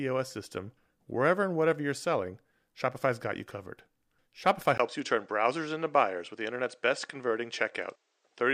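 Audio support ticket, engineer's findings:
Speech dulls abruptly at 4.78 s through end; 20 ms dropout at the switch, nothing above 8.9 kHz after, new faint noise floor, level unchanged. Likely input switched to a poorer device. Gap plus noise change separates it from a filter or codec.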